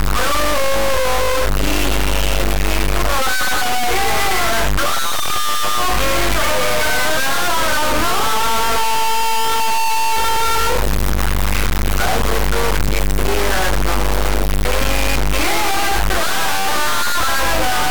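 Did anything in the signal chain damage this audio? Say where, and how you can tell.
Yes. A stuck bit, likely at the converter or its data lines, buzzes harshly throughout and fills pauses with broadband spectrogram hash; waveform samples jump in steps near -10 dBFS.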